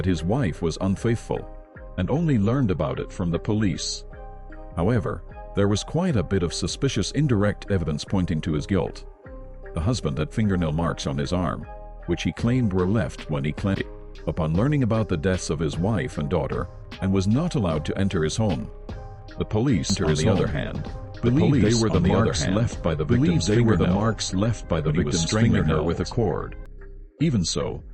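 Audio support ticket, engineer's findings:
Likely second capture path or misaligned edit layering the signal twice: doubled audio track 19.90–26.66 s, full-band copy about 2 s late, roughly equal level, abrupt start and stop, no decay.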